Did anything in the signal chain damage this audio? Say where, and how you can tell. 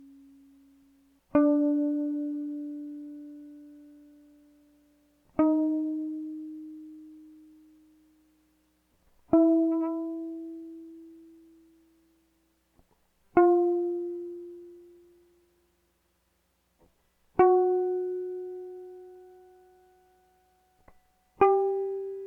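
No, nothing in the chain seems to have hurt this music, and there's no point where the signal gets roughed up along the way.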